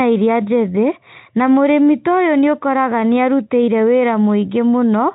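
Nothing in this speech clip stands out as a technical fault, so there's really nothing to flag here.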